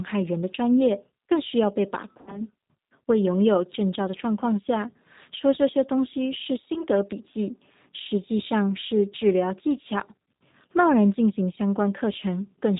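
Throughout, the G.729 codec cuts everything above 4 kHz and gives the speech a rough, synthetic edge. A simple low-pass filter would sound dull but smooth. Packet loss concealed by the speech codec occurs at 2.21–2.42 s, with about 60 ms of audio missing, and at 6.74–6.86 s, with about 20 ms missing. Each gap becomes a fading buzzy or noisy extension of the last sound, and the voice stays weakened briefly afterward.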